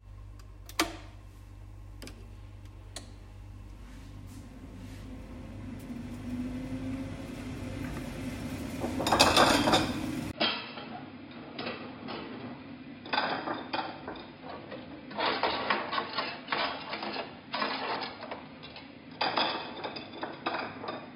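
From 10.31 s, after a 20 ms gap, sound turns dull, quieter and noisier, cut above 5 kHz: likely input switched to a poorer device.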